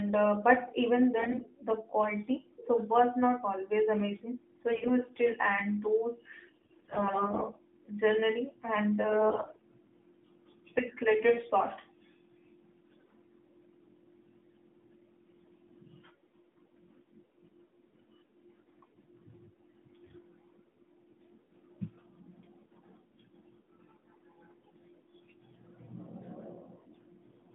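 Speech carried over an AMR narrowband mobile link, whose 150 Hz to 3.6 kHz band and slight codec colouring fit the 12.2 kbps mode, suffers AMR bit errors: weak-link bit flips, roughly one in ten to one in seven, corrupt the less protected bits of each frame. This misplaces excitation pulses and skews pitch, gain and spectral detail. The voice turns hoarse, scratchy and gargly at 1.18–1.43 s, between "uh but even" and "the quality"; 4.72–4.99 s, just before "still and those"; 6.40–7.43 s, right after it; and 9.08–9.62 s.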